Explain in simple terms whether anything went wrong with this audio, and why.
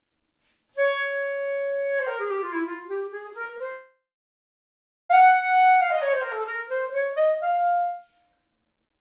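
Short concealed packet loss at about 3.44, 3.47 and 3.58 s: tiny chunks of sound arrived too late, so the receiver patched each gap by stretching the previous sound, leaving brief smears.

Long network dropout from 3.72 to 5.11 s: the last sound continues as a fading buzz or hiss, then about 1.1 seconds of silence. This is likely lost incoming audio; the missing part never returns. Throughout, the call's phone-style coding cuts everything above 4 kHz, giving a narrow sound.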